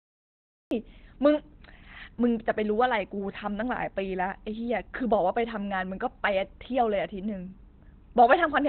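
The first 0.71 s is digital silence. At 0.71 s the speech cuts in mid-sound, with no attack or fade. This is a cut-off start, where recording began late. Throughout, the speech is muffled and hoarse, with nothing above 4.3 kHz. The likely cause is Opus compression in its narrowband speech mode, which fits a low bitrate near 16 kbps.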